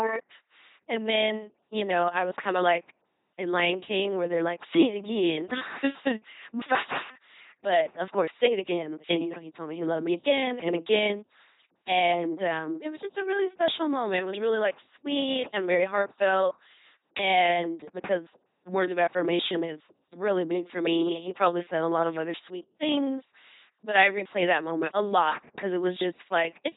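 Throughout, the speech sounds like a buzzing, mechanical robot with heavy damage and nothing above 3.9 kHz. This is the LPC-10 vocoder, which fits 2.4 kbit/s. It rebuilds each moment as either a pulse-driven buzz or noise through a ten-pole filter.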